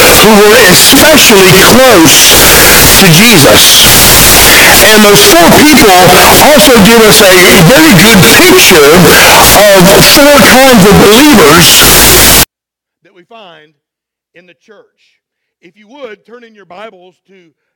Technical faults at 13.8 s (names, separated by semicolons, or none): none